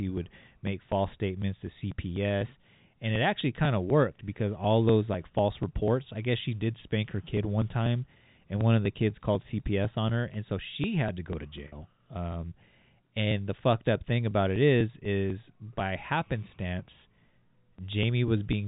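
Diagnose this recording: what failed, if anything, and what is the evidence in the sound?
The fault is at the driver or buffer stage: periodic USB or driver dropouts. From 0.18 s to 18.53 s, regular ticks sound every 0.25 s, about seventy in all. Each one is a gap of about 2 ms where audio was skipped, not filled with silence. Something blocked the USB bus or audio driver on a fixed schedule. The ticks only show while speech is present, so they come and go with the talker.

The second fault is on the network: packet loss with pitch repetition, from 11.68 s to 11.72 s. About 40 ms of audio went missing, which points to two lost packets. The receiver covered the gap by repeating the last pitch period. The result is a short, held, buzzy tone before normal speech resumes. The G.711 A-law telephone coding carries the speech through both events and is not the source.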